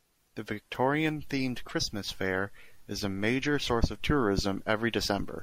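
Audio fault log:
1.69–1.71 s and 3.67–3.69 s, corrupt frame decoded: each event is a short glitch lasting about 22 ms, the span of what sounds like a single damaged compressed frame. Flipped bits scrambled that frame's gains and spectral codes, yet the decoder still played it, so energy appears at frequencies unrelated to the surrounding speech. The first glitch peaks around -30 dBFS; the second is noticeably louder, near -20 dBFS.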